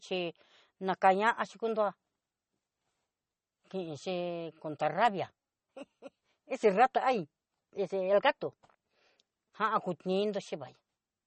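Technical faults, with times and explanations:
Throughout, MP3 compression: speech sounds watery and swirly with nothing above 8.4 kHz, likely from a low bitrate near 32 kbps zeroing weak frequency lines.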